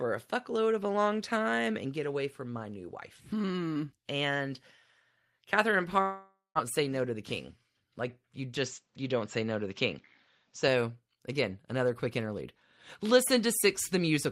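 Long network dropout, 6.01 to 6.58 s: about half a second of speech likely never arrived. The receiver stretches the last sound into a fading buzz, then near-silence, and resumes with that stretch missing.

Input switched to a poorer device, 8.58 to 10.68 s: the speech abruptly turns duller, with nothing above 7.5 kHz and a faint new noise floor. This was likely a change of microphone, made without a gap and with little level change.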